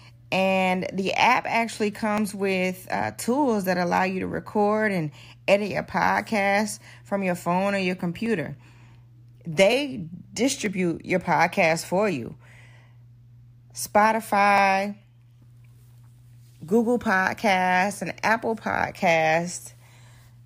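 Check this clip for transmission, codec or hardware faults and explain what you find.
Five sharp clicks at 2.18, 8.26, 9.73, 10.66 and 14.58 s are likely dropped samples: under a millisecond of speech vanishes, so the waveform steps abruptly, drawing thin vertical lines on the spectrogram.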